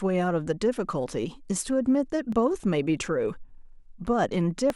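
From 1.13 s to 4.70 s the speech carries a regular click, about four in all, every 1.19 s. These are likely clock drift buffer slips. Two clocks disagree by roughly a tenth of a percent, so a few dozen samples get dropped or repeated.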